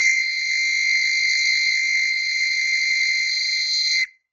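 From start to finish the music sounds heavily degraded: tones come across rough, grainy and noisy rather than clean, and there is no content above about 8.2 kHz. This is likely Opus compression in its music mode, with the damage fitting a rate around 12 kbps. At that rate the encoder keeps each band's energy but fills detail with noise or folded copies of lower bands. On a spectrogram, energy stops in a flat ceiling near 8.2 kHz, and bands below it look smeared and noise-textured rather than showing crisp harmonic lines.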